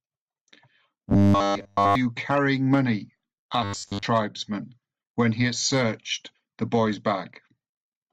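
From 1.09 to 1.95 s the speech turns into a rigid metallic buzz, a robotic sound from repeated short buffers. Nearly all of it is replaced. The buzz sits at 100 Hz, which fits a 10 ms chunk being looped. It returns from 3.64 to 4.05 s, where most of the sound is affected. The likely cause is audio arriving too seldom, with the last fragment replayed while real audio is skipped.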